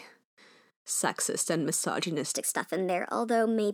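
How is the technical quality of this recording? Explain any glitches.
One glitch stands out near the end of this speech clip. From 2.35 s to the end, the voice jumps about three semitones higher and hurries. This section at the wrong speed plays 1.19 times too fast, likely from being fitted to the wrong clock.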